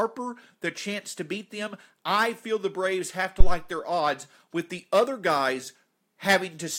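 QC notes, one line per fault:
3.40–3.60 s, phantom power thump after "have to": a supply step through the coupling capacitors gives a deep thump near about -2 dBFS, decaying in 45 ms, lower than a click.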